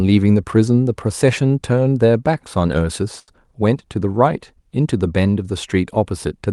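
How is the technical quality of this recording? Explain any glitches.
The recording has one glitch, a short stall from a late packet, and it has passed through a call codec whose top end stops at about 12 kHz.

From 3.19 to 3.31 s the speech hangs for a moment. A packet was late, the jitter buffer ran dry, and the receiver stretched the last stretch of sound for about 84 ms until the data caught up. Playback then continues from the same point, so nothing is lost, but that sound is drawn out with a faint buzz or dip, and everything after it runs about 84 ms later.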